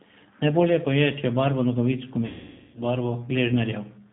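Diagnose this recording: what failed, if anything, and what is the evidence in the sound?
The whole recording passed through the G.729 codec, audible as the codec-stage fault. Nothing is heard above 4 kHz, and the speech has a rough, synthetic edge throughout. This comes from the decoder rebuilding each 10 ms frame from a vocal tract filter, a pitch predictor and a handful of pulses rather than the original waveform. The plainly audible damage points to a low-rate variant at about 8 kbit/s, consistent with G.729A.

At the network stage, VoIP packet loss concealed by the speech codec appears just after "je če barvo nogavic", from 2.26 to 2.83 s. There the speech is stretched into a buzzy tone or a coloured noise that weakens as it goes. The gap is about 480 ms, which fits a run of roughly 16 lost packets. The decoder kept extrapolating from its last pitch and filter while lowering gain, and the sound stays weak as the following frames rebuild from that degraded state.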